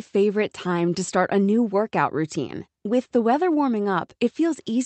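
The speech carries no technical faults, and its top end stops at around 8 kHz, which is what a call path running the Opus codec at a moderate bitrate normally leaves behind.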